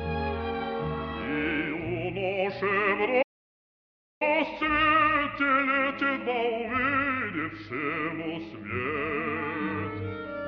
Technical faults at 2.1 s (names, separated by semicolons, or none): none